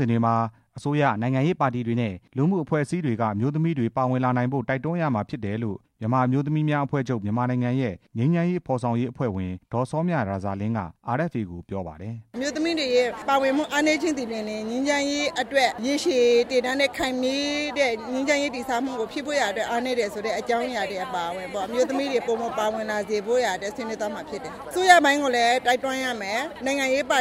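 From 1.06 to 2.73 s the audio runs about 5.8% fast and rises roughly 97 cents, nearly a semitone, then snaps back, likely a drift correction step where clock-matching software abruptly changed playback rate.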